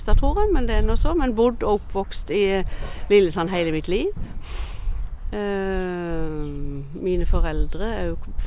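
No technical faults can be heard anywhere in the clip.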